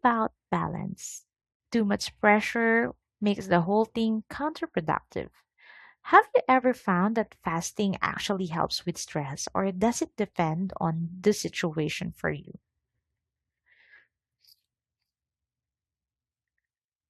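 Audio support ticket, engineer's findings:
Sudden gain jump, 1.19 to 1.6 s. Level drops about 12 dB instantly, speech and noise floor together, then returns. Likely cause: a gain setting applied without a ramp. Step lands between adjacent samples.

Compressed frames skipped, 12.45 s, just after "on the situation for". Roughly 20 ms of audio missing. Decoder dropped missing or corrupt frames.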